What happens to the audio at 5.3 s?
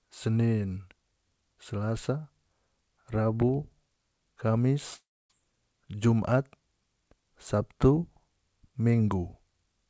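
At 5.3 s the audio is coming out of a long network dropout spanning 4.94 to 5.31 s. The last sound is stretched into a fading buzz, then about 0.26 s of silence, and speech resumes with roughly 0.36 s lost, likely from a network outage. A brief glitch would not decay into silence like this.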